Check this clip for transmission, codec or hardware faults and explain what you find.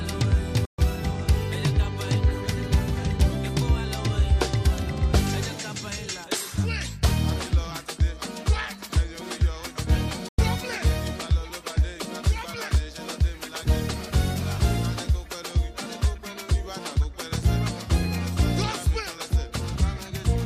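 There are two digital broadcast dropouts, at 0.65 to 0.79 s and 10.28 to 10.39 s. Bad frames muted the receiver, so the sound snaps to silence and returns.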